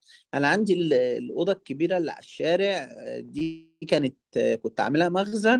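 At 3.25–3.31 s and 3.39–3.43 s, short stalls from late packets occur: the jitter buffer ran dry and the receiver held the last speech sound for about 33 ms and 20 ms, giving a drawn-out sound with a slight buzz or dip and nothing lost. From 3.43 to 3.84 s a call audio freeze follows, likely caused by packets held up in transit. The last sound is continued as a fading buzz or hiss for about 390 ms, including roughly 50 ms of silence, before speech resumes where it stopped. A third short stall at 5.28–5.34 s stretches the sound for about 43 ms.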